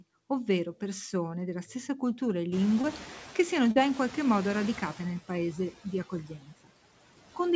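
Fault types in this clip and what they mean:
Noise suppressor artifacts: steady background is pulled down by about 17 dB throughout; spectrogram shows noise floor dipping between syllables, rising beneath them.
Noise suppressor catching up: room noise jumps near 2.5 s after "della stessa cultura e"; reduction starts weak, about 8 dB, deepening over 2.5 s, a fading band on spectrogram.
Short concealed packet loss: gaps at 2.82–2.85 s and 3.71–3.77 s were filled by extending prior sound, heard as brief smears; spectrogram shows smeared energy there.
Speech cut by the noise suppressor: after "nel paese di", 6.09–6.70 s, parts of the speech, roughly 0.3 s in total, drop up to about 18 dB, showing as thinned waveform.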